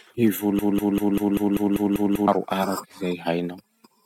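The playback or stream likely stalled at 0.59 s, replaying its last 196 ms fragment nine times until 2.28 s: a stuttering broken-record loop that skips the speech in between.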